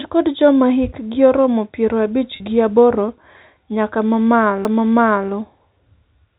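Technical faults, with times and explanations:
2.36 to 2.40 s, packet loss with pitch repetition: about 40 ms of the signal never arrived, a gap that fits two 20 ms packets, and the receiver filled it by repeating the last pitch period while fading it out. Because the gap is so short, the fade never reaches silence. The result is a brief held, slightly buzzy tone where natural variation should be, before the real signal resumes with a quick cross-fade.
4.65 s, CD skip: a very brief mute of a few milliseconds marks the point where the laser jumped onto a different turn of the disc's spiral. Playback then continues from a different place in the recording, jumping by one or more disc turns. The faint telephone-band, 4 kHz-limited character of the G.711 coding is present on both sides of the jump, which sets the skip apart as a separate discontinuity.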